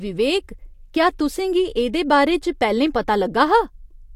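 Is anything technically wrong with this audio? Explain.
No, there's nothing technically wrong to point to here; the speech comes through without any problem worth flagging.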